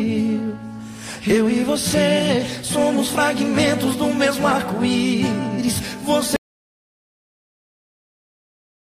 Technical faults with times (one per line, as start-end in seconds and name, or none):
6.36-8.98 audio dropout to silence